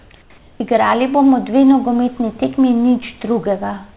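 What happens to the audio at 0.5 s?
The sender likely paused transmission during silence, so from 0.38 to 0.6 s comfort noise replaces the real background with a steady, featureless hiss, about 1 dB different in level.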